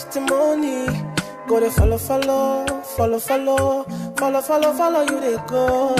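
No audible faults; the signal runs uninterrupted without any technical defect to report.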